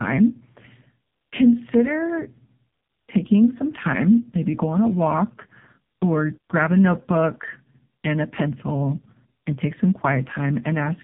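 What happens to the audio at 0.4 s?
At 0.4 s, as throughout, there is tandem speech coding. Two AMR-NB coders in a row compound their damage, making speech rougher and more warbly than one codec, with nothing above 3.8 kHz.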